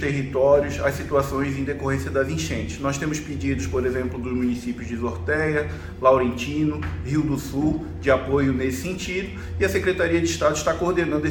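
Nothing is technically wrong with the audio.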